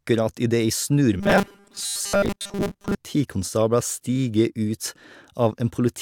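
Robotic sound from repeated short buffers affects this speech clip from 1.20 to 2.97 s: a rigid 200 Hz buzz follows the voice only roughly. It is likely caused by a 5 ms chunk being looped while most of the real audio is skipped.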